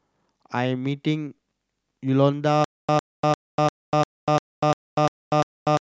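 From 2.64 s the stream likely stalls, replaying its last fragment: a stutter with silent gaps, one 104 ms burst every 348 ms amid digital silence to the end.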